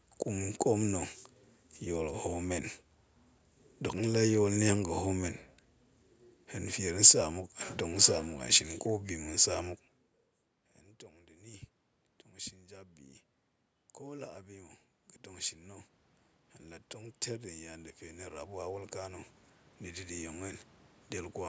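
From 11.11 to 20.67 s the automatic gain rising fault appears: after the input dropped by about 24 dB, the gain control slowly lifted its gain by about 17 dB, so the voice and room noise swell together gradually, trailing the talker's move around 9.5 s.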